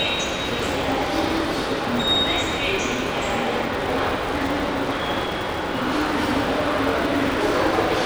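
From start to finish, a buzz at 375 Hz rides on the sound: the filter is restarted on every block, beginning each one from silence, which fits a 128-sample block. Each restart leaves a small transient, so the waveform shows evenly spaced ticks and the spectrogram shows a harmonic comb that rises and falls with the signal's level.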